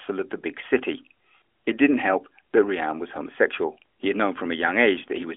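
No technical fault can be heard in the speech, which comes through the AMR narrowband mobile codec at 12.2 kbps within the usual telephone band of 300 Hz to 3.4 kHz, with nothing above 3.6 kHz.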